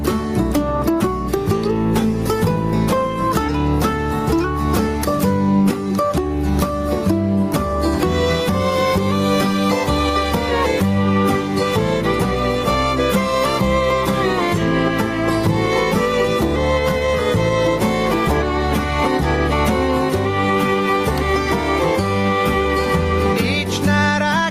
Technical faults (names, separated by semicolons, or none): gain pumping